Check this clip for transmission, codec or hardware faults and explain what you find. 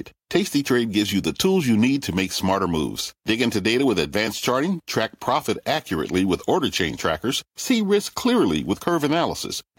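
No transmission, codec or hardware faults are audible here.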